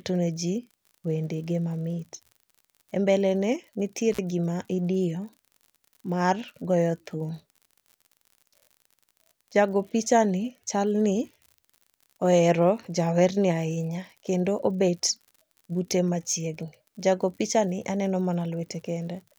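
A steady fine crackle runs under the speech from start to finish, pauses included: an unreliable data bit, a marginal line flipping randomly with spikes of about -37 dBFS. From 4.12 to 4.19 s the sound drops out for about 47 ms with crackle at both edges, an intermittent contact where a loose connection briefly opened.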